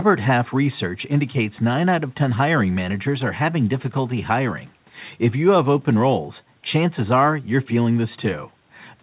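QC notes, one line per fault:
Nothing to flag on this speech clip; it comes across as ordinary call audio, with the narrow telephone-style band topping out around 4 kHz that you'd expect from a G.711 A-law call path.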